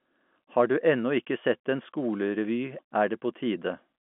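No faults found: the speech carries the usual G.711 telephone band, about 200 Hz to 3.4 kHz, with nothing above 3.8 kHz, as that format implies.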